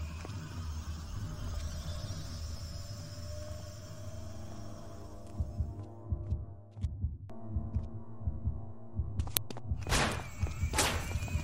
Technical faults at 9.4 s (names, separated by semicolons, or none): uninitialised buffer